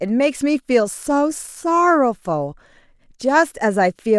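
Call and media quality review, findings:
No faults found in the audio path; the speech signal shows no dropouts, clipping, distortion, timing errors or level problems.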